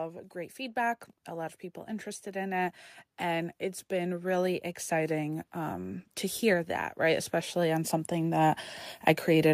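From 0.32 s to 8.65 s, automatic gain rising is heard. The gain control judged the input too quiet and kept turning it up, by about 14 dB in all. The voice and the background noise swell together, slowly and steadily, across the clip.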